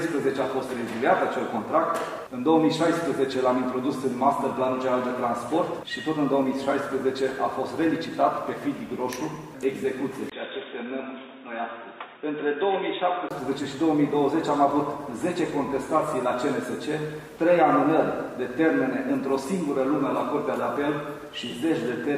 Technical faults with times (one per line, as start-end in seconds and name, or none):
10.30-13.31 input switched to a poorer device